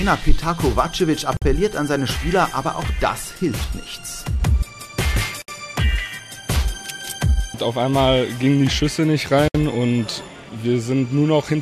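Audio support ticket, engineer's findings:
Gap at a join of encoded pieces: 1.37 to 1.42 s (50 ms), 5.42 to 5.48 s (64 ms), 9.48 to 9.55 s (64 ms), repeating every 4 s. Symptom: silence cuts into continuous sound, edges smeared, sound resumes where it stopped. Probable component: segment encoder/concatenation stage. Mechanism: 4 s chunks encoded separately and joined untrimmed. Each encoder's start-up delay and last-frame padding survive as a silent hole at every seam.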